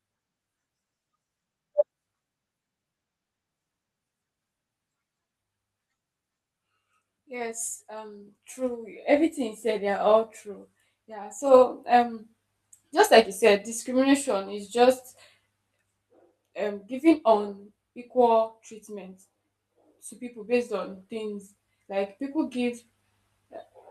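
Listening through the speech, nothing technical stood out.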